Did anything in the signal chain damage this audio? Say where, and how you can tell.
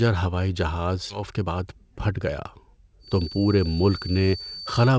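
Yes, three spots. First, there's a skip ahead at the network or jitter buffer stage, around 1.10 to 1.12 s, right after "ہوائی جہاز". Playback jumps forward with no fill at all. Something like 400 ms of speech is simply gone, and the two sides are butted together almost directly. That fits audio being dropped in transit or discarded when the buffer overflowed while newer packets were already queued.

Right after that comes a jitter buffer speed-up, from 1.19 to 2.48 s. The speech runs at about 108% of normal speed but keeps its pitch, so it sounds a bit rushed rather than chipmunky. The buffer was sitting on more delay than it wanted, so it trimmed roughly 100 ms in total by cutting out short pitch-period-sized chunks over and over until it was back on target.

From 2.99 s to the end there's a feedback whistle, a thin, steady tone at 4.6 kHz sitting about 15 dB under the speech and swelling and fading slowly in level. 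It never runs away, so the likely cause is a loudspeaker-to-microphone acoustic loop parked right at the edge of feedback. The tone survives the G.722 call path fine, since that codec passes nothing above 8 kHz but keeps the band well above 4.6 kHz.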